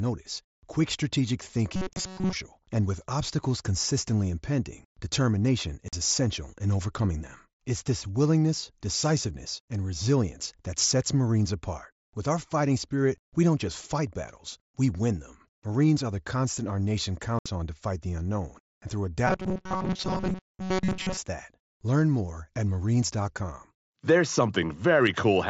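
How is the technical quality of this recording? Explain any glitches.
The recording is marred by two kinds of glitch, heard over a wideband headset link that passes speech up to about 8 kHz with light graininess.

From 1.76 to 2.33 s, after "quick strategic" and before "and with obstacles consistently", and again from 19.27 to 21.17 s, after "the unknown and through", the speech turns into a rigid metallic buzz at 188 Hz. This is robotic sound from repeated short buffers, likely caused by audio arriving too seldom so that playback loops a fragment of about 5.3 ms, skipping most of the real sound.

Unconcealed Bluetooth headset packet loss punches abrupt holes at 1.93 s (30 ms), at 5.88 s (45 ms), between "obstacles consistently impending determination" and "essential in overcoming them", and at 17.39 s (67.5 ms). Lost packets between headset and phone were replaced with silence or an idle pattern rather than patched over, so the gaps have hard edges, and the lengths fit runs of 7.5 ms packets.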